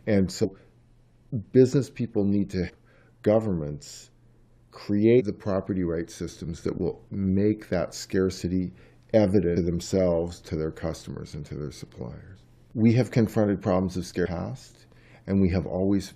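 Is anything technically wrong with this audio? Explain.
Yes. Damaged data in a compressed stream occurs at 0.43–0.45, 2.68–2.70, 5.19–5.21, 9.53–9.57 and 14.25–14.27 s. Corrupted bytes make the decoder misread frames and lose sync while searching for the next header, so each spot is a brief chirp or blip.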